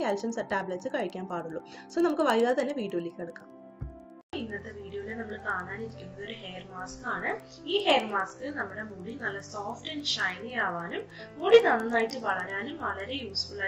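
A resampler restarted on every block, converting each 100 ms chunk separately, likely from 16 kHz up to 48 kHz, so every block edge lacks its true neighbouring samples. Throughout the audio this leaves a regular tick at 10 Hz, heard only while sound is present.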